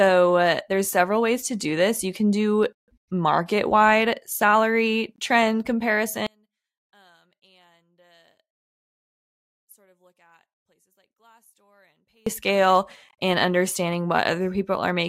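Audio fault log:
6.27–12.27 s, one channel inverted: one side of the stereo pair likely had its polarity reversed, so summing to mono cancelled everything the two sides shared. For these six seconds the speech falls by about 37 dB, leaving only the channels' small mismatch.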